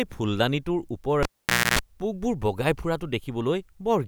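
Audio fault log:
1.23–1.79 s, cable pulled and plugged in: a sharp pop cuts the speech to near silence for about 0.51 s, a coarse 60 Hz mains buzz lasting about 0.28 s follows, and a second pop brings the sound back. A live cable was pulled from its socket and pushed back in. Each contact make and break snaps the signal level. While only the plug's tip touched, the unshielded hot contact picked up 60 Hz hum from the power wiring.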